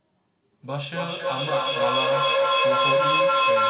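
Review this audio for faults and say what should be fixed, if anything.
From 0.63 s to the end, the speech suffers feedback echo between two devices. A second device replays the call audio into an open microphone, so every word comes back roughly every third of a second. Each return is thinner and more ringing. The repeats build rather than fade, peaking about 10 dB above the speech. On a spectrogram this appears as stacked, evenly spaced copies of each syllable. Within the 4 kHz band of the G.711 call path, the echoes lose high-frequency detail with each return. To prevent it, mute the microphone or speaker on one of the two devices in the room, or have only one device join the call.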